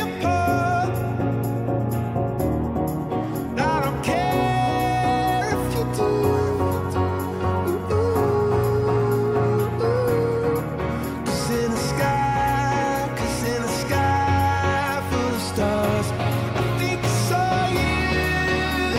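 No technical faults are audible.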